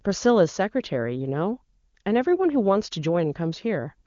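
No technical faults are audible.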